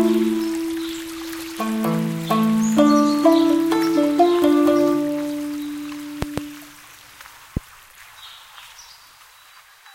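Two loud pops land around 6.22 to 6.40 s, then one more near 7.57 s, jumping well above the sound. Likely a voltage spike from a plug or switch.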